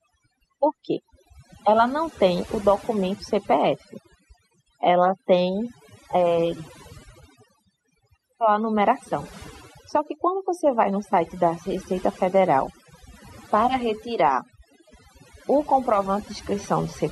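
From start to finish the pauses between phrases drop to near silence dotted with twinkling, chirping specks. This is overdone noise removal: a noise reduction stage set far too aggressively pulls individual frequency bands down hard whenever they sit close to its noise estimate. The quieter components of the voice get caught in that net and vanish along with the noise, leaving gaps and isolated surviving fragments.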